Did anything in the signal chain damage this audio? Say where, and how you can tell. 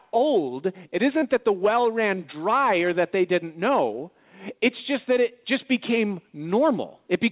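Yes: short concealed packet loss on the network at 1.19–1.25 s, before "that the well ran". About 28 ms was refilled by extending the prior sound, which shows as a smeared, repeating spectrogram patch.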